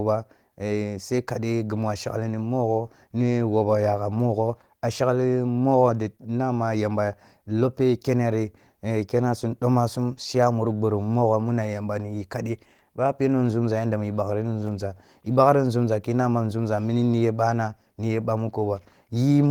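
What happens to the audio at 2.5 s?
At 2.5 s the speech carries on without interruption, with no dropout, click, distortion or other fault at that moment.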